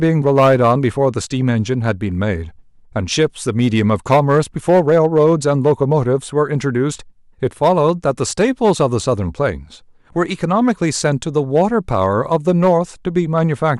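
Throughout the speech, the level driven into some stage of the chain exceeds what it can pass by about 8 dB, so hard clipping slices the peaks flat on a small fraction of samples. Those squared-off tops add high harmonics, heard as crackle on loud syllables.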